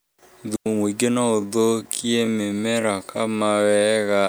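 At 0.56 s the speech cuts to near silence for about 101 ms, resuming at 0.66 s. The gap is clean, with no click, hiss or noise burst on either side, and the level drops and returns through a very short fade. That is the signature of a digital wireless dropout: the link lost too much data in that window, so the receiver muted its output rather than pass corrupted audio.

From 1.29 s to the end, the pace slows abruptly to roughly 0.58 times normal speed while the pitch stays where it was. The slowed speech drags. This is likely a time-stretched section: software lengthened the audio to fill a longer duration and preserved pitch by repeating short fragments.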